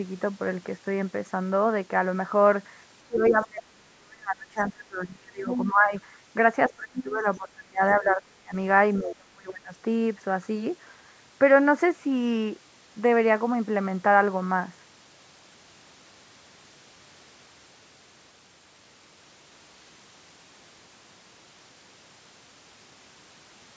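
A speech clip with its level cut while both sides talk. This is speech suppressed in double talk, at 3.07–5.93 s, 6.69–8.55 s and 8.99–9.74 s. The level drops by up to about 30 dB, in pieces. The echo canceller likely mistook the overlap for echo and turned the talker down. The other side's voice leaking through appears at 3.16–3.39 s, 5.48–5.69 s and 6.99–7.03 s. These are brief scraps, about 10 dB below the talker. The echo canceller likely left some loudspeaker sound in the microphone signal. The audio carries nothing above 8 kHz, consistent with the call's microphone processing.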